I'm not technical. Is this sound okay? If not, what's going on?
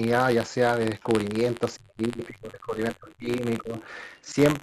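No. Three things are going wrong in this speech recording.

Buffer tearing runs through the whole clip: a steady robotic buzz, about 94 times a second, heard only while sound is playing. It fits a 512-sample buffer where tiny slivers of older audio slip in.

The other side's voice leaking through shows up from 1.0 to 1.1 seconds and from 4.27 to 4.33 seconds as a very faint second voice. This is likely an echo canceller missing loudspeaker sound. It adds sound rather than removing it.

Speech suppressed in double talk hits from 1.76 to 3.46 seconds and from 3.62 to 3.78 seconds. The main voice drops sharply or cuts out, likely because both people talked at once.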